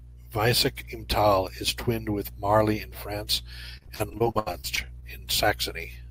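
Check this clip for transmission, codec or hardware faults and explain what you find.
One fault, in the speech from 3.77 to 5.04 s: repeated packet loss (robotic sound). Over a dozen short gaps, the longest 73 ms, get patched by stretching the previous sound, so it turns choppy.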